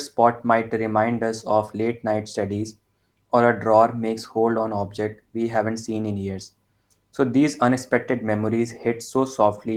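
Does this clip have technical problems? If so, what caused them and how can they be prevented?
No, nothing here registers as a fault; the Opus voice compression at about 20 kbps in hybrid mode, which fits a fullband setup, leaves only light coding traces that are within normal bounds for that rate.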